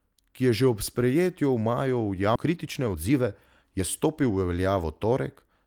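At 2.35 to 2.37 s the speech makes a skip ahead. Roughly a second of audio is dropped and the two sides are joined with no gap, so the speech jumps forward abruptly. This is unlike a speed-up, where the audio is squeezed gradually.

Jitter buffer speed-up follows at 2.45 to 3.27 s, running at 126% speed, and again at 3.77 to 5.12 s at 113%. Each removes around a fifth of a second through many tiny pitch-period cuts, so the speech sounds hurried while its pitch stays unchanged.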